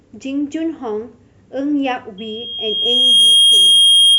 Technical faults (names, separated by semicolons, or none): loudspeaker feedback squeal